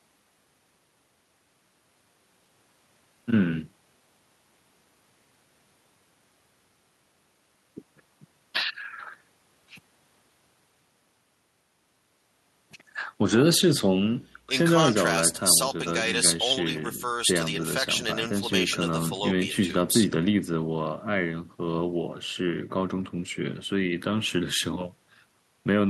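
No technical faults can be heard anywhere in the recording; the signal stays steady and intact throughout.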